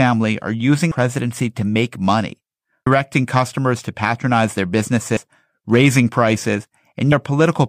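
Speech that jumps forward at 2.86 s, just before "customers to patronize their", at 5.17 s, just after "customers to patronize their", and at 7.12 s, losing roughly 300 ms, 150 ms and 400 ms. These are compressed frames skipped: whole frames, fitting a 32 ms frame length, went unplayed.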